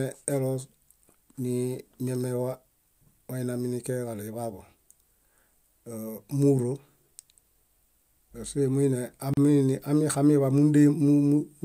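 At 9.34 s the speech drops out into a short silence, ending at 9.37 s. This is a gap at a join of encoded pieces. The audio was encoded in separate parts and then butted together without trimming. The encoder's start-up delay and the padding on the last frame both survived. That leaves a gap of about 36 ms. Its edges are smeared by the codec. The speech then resumes exactly where it stopped.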